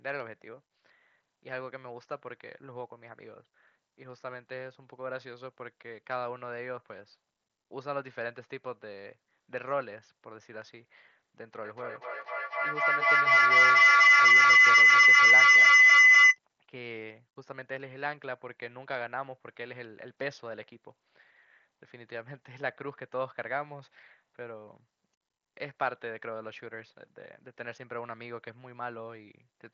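A speech recording, heard through what sounds like a wideband Bluetooth headset link (mSBC, with nothing much above about 7.4 kHz and a faint grain on louder syllables). The real problem is a feedback howl from 11.63 to 16.39 s: two devices sharing the call in one room, with each trip around the mic-to-speaker loop getting louder. It narrows to a tone around 2 kHz, pulses at roughly a fifth of a second, and peaks about 18 dB over the speech before the loop breaks.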